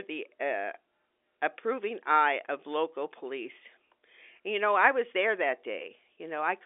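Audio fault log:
No faults detected.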